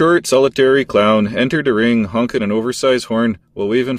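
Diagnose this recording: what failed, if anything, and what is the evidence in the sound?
Nothing stood out on listening to this speech recording, so there is no failure to diagnose and no evidence of one in the sound.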